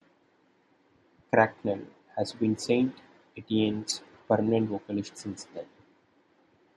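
At 3.88 to 3.92 s, just before "permanent vocalist since then", the speech jumps ahead through a garbled 40 ms glitch. The cause is likely a broken MP3 bit reservoir, with frames decoded against bytes of other, missing frames. It spans under two 24 ms frames and shows as a short smeared block on a spectrogram, with a discontinuity in the waveform.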